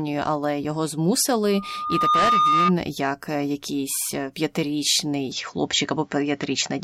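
From 1.46 to 2.73 s a loudspeaker feedback squeal rises: a single tone at 1.2 kHz swells over roughly 0.7 s to sit about 5 dB above the speech. The microphone is picking up its own loudspeaker, and at that frequency the loop gain exceeds one, so the tone keeps feeding itself.

At 5.32 s the sound turns duller with no gap and no level jump, and it stays that way to the end. Nothing above 7.6 kHz gets through, and a faint new noise floor appears far below the speech. The likely cause is the input switching to a poorer device.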